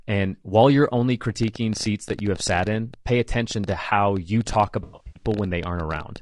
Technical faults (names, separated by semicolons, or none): low-delay AAC compression; train of clicks; AAC frame loss with concealment